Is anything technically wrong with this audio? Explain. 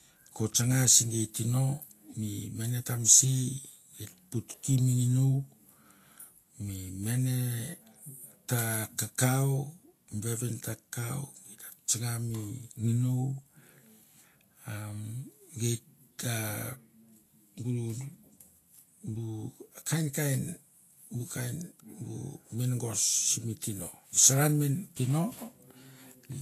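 Yes. Vorbis compression runs through the whole speech clip: the damage is plainly audible, and the likely cause is a low-quality Vorbis encode, in keeping with a bitrate around 36 kbps. The encoder has cut everything above 14.2 kHz and quantised the remaining treble so coarsely that fine detail has turned into noise of similar energy. The result is a hissy, grainy top end, roughened tones and softened attacks on consonants.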